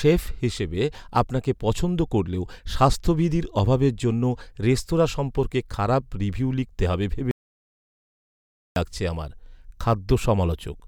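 A speech recording with an audio dropout to silence. After "খারাপ রিভিউ লিখতে হবে" the sound cuts to silence at 7.31 s. It returns at 8.76 s with "লাগছে আমার". About 1.45 s is missing, with no room tone. The likely cause is a lost input while recording continued.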